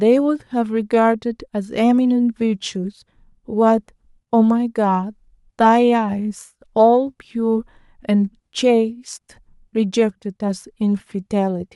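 No technical faults can be heard.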